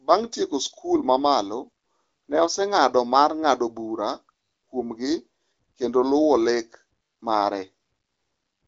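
There are no technical faults to describe at any point in this speech.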